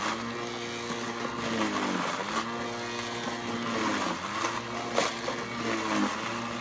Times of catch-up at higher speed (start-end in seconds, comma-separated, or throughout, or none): none